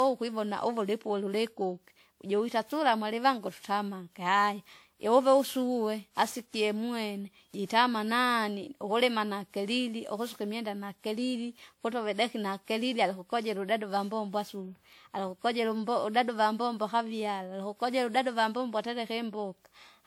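Throughout the speech, the audio has likely been through generation loss: repeated lossy encoding, pointing to around ten passes of WMA at about 96 kbit/s. Each re-encode quantises on a shifted frame grid, so errors stack into swirly, hollow smearing and blurred attacks, and there is nothing above 20.1 kHz.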